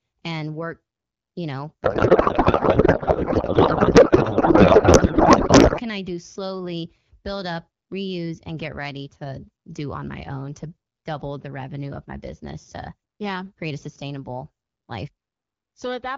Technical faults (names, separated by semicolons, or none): codec payload misread